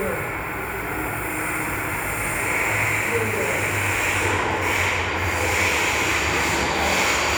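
No technical fault can be heard in this recording of sounds, and the signal stays steady and intact throughout.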